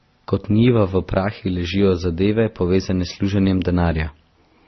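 The speech in this clip was likely run through a chain of lossy codecs, a low-bitrate MP3 stage followed by Opus and then WMA, so this is transcoding between lossy codecs throughout. Nothing sits above 6 kHz, a ceiling left by the lowest cut-off in the chain that the later, roomier passes cannot undo. Each re-encode spends bits on the artefacts it inherits, so different codec artefacts pile up together across the whole recording.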